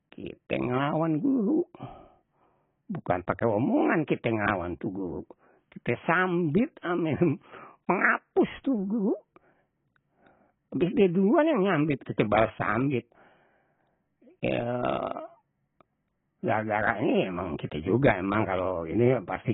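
AAC compression throughout: nothing above 3.8 kHz, so the speech sounds dull and heavily smeared. The likely cause is an AAC-LC encoder starved of bits, which fits 16 kbps.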